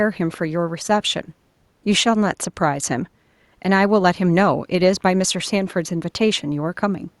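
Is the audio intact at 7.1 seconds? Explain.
Yes, the audio is intact at 7.1 seconds, with only the room's own background noise sitting about 44 dB below the speech.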